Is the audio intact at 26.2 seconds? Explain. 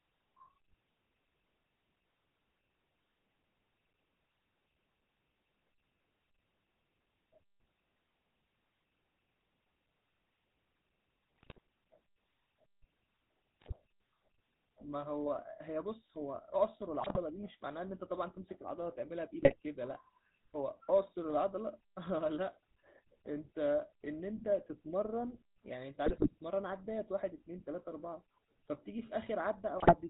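No. From 26.06 to 26.32 s the sound breaks up with GSM bit errors. Corrupted bits reach the decoder, so filter, pitch and gain values go wrong for a run of roughly a dozen 20 ms frames. That skews the spectrum and kicks the level up, giving squawks, pops and a gargling texture. This differs from packet loss, which leaves gaps or smeared repeats. Here the decoder keeps producing sound, but the sound is wrong.

Around and under that burst sits the GSM full-rate codec, heard throughout and consistent with 13 kbps GSM full rate. It rebuilds the sound from a vocal-tract filter excited by regularly spaced pulses, with nothing above 4 kHz. The result is a steady, plainly audible buzzy, gravelly roughness. Unlike the bit errors, this coloration is constant rather than a sudden outburst. It lacks the swirly, watery artefacts of modern perceptual codecs.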